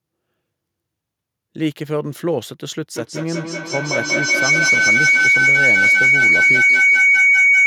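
From 2.95 s to the end, feedback howl: a loop gaining level builds a tone near 2 kHz, with the loop repeating about every 200 ms, reaching about 10 dB above speech, a bright horizontal spectrogram line.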